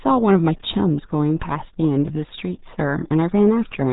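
Speech runs through the RealAudio 14.4 codec from start to finish. Nothing above about 3.8 kHz survives, so the sound is narrow and muffled. The damage is heavy. Vowels turn gargly and consonants smear. This is a low-rate speech coder built for dial-up modems. It discards the upper band and rebuilds the rest from a coarse model. The loss fits a bitrate of about 8 kbit/s.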